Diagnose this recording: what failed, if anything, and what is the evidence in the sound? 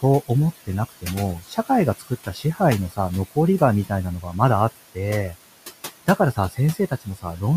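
The failure sits in call processing, where a noise suppressor is at work across the whole recording. The room noise, which sits about 16 dB below the speech, is pulled down by about 16 dB whenever the talker pauses and then returns under each phrase, so the background pumps in and out. The suppressor is estimating the steady noise frame by frame and attenuating every band it assigns to noise.

The same suppressor also removes parts of the speech itself. Speech is cut by the noise suppressor at 1.4–1.7 s, 1.99–2.6 s, 4.22–4.35 s, 6.06–6.58 s and 6.74–7.4 s, with drops of about 13, 14, 8, 16 and 14 dB. In each span only brief portions are hit, around a tenth to a third of a second, which is enough to swallow soft consonants and word endings. Low-level speech energy resembled the noise estimate, so it was gated down with the background.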